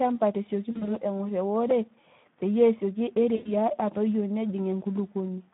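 Speech coded with the Speex codec throughout: the hoarse, grainy texture fits a low bitrate of about 11 kbps, and a spectrogram shows energy confined to roughly 150 Hz to 3.6 kHz, blank above. VoIP packet loss concealed by the speech codec appears from 0.71 to 0.97 s, with short gaps scattered across that stretch, and again from 3.35 to 3.52 s. In both places the spectrogram shows frozen, smeared harmonics that fade in level before normal speech resumes. A repeated buffer at 1.71 s produces a click. The waveform shows a very short segment played three times with hard joins, which fits a 64-sample buffer.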